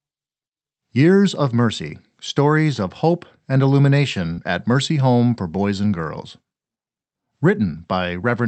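At 4.33 s, a brief 37 ms smear marks a short concealed packet loss of 40 ms: the receiver extended the preceding speech over the missing audio, then blended back.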